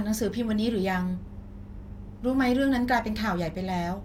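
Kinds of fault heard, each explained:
No technical faults detected in this speech recording.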